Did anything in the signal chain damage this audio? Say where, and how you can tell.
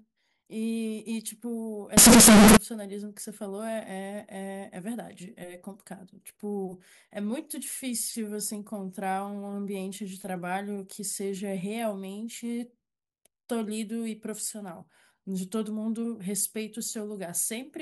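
Yes. From 1.97 to 2.57 s the speech jumps to a harsh, near-square roar at an almost fixed, high level, with background noise as loud as the talker yet pitch still traceable. That points to a sample-format stage, likely float read as integer: 32-bit float data interpreted as 32-bit integers. Ordinary overload clipping would flatten only peaks and leave quiet noise quiet.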